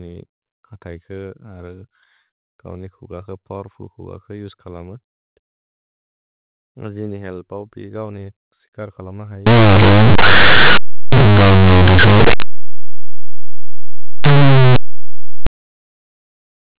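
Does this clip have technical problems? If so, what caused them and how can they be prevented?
Yes. From 9.47 to 15.47 s the mu-law bytes play as plain 8-bit samples, which is companded audio read as linear. This produces harsh, buzzy distortion and loud noise in pauses. On a waveform, each sign change swings over about half the range; a spectrogram shows broadband smear. Tagging the stream as mu-law ensures it is expanded before playback.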